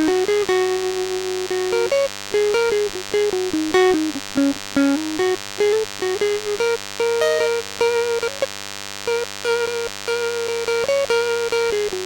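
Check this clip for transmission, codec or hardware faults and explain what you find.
A thin, steady buzz sits under the music for its whole length, fairly prominent and not far below the music itself. It is a DECT cordless phone buzz: a DECT handset or base station nearby transmits a short radio burst every 10 ms, and the audio circuitry rectifies those bursts into sound. The result is a 100 Hz buzz with many harmonics stacked above it, giving the edgy, thin quality heard here.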